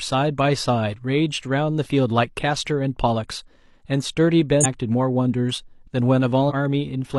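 Speech, with compressed frames skipped twice. At 4.60 to 4.66 s and again at 6.46 to 6.52 s, the audio jumps forward. Each time, roughly 0.7 s of speech goes missing. That fits around fifteen frames of about 46.4 ms each. These frames were lost from the file or rejected by the decoder as damaged.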